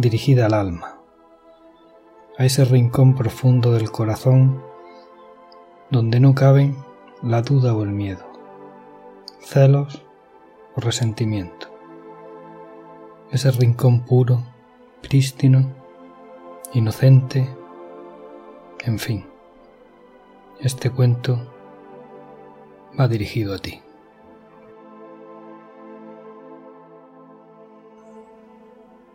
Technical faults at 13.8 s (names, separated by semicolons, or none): none